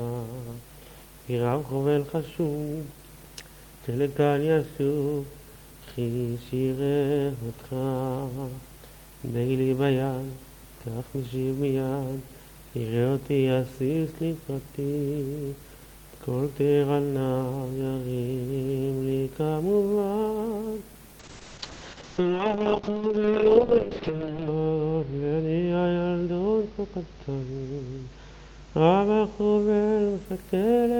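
From 21.2 to 30.31 s, a call bitrate drop makes the encoding coarse and watery and removes everything above 8 kHz, unlike a plain filter's clean dulling.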